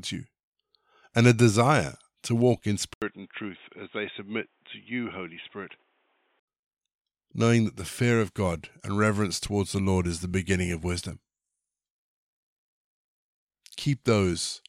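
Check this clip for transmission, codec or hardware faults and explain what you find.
One fault: from 2.94 to 6.48 s, the input likely switched to a poorer device. After an 80 ms gap the speech narrows to nothing above 3.8 kHz, turning dull and boxy, drops about 10 dB in level, and gains a new noise floor roughly 40 dB down, before clearing again.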